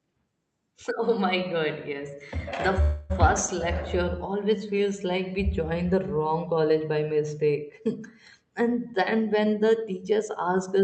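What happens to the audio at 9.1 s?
At 9.1 s the call is in a jitter buffer speed-up running from 8.46 s to 10.78 s. The receiver's buffer had built up more audio than it targets, so it trimmed short pitch-period-length slices over and over to drain the excess, removing roughly a fifth of a second in total. The speech plays back at about 108% speed with its pitch unchanged, so this stretch sounds hurried.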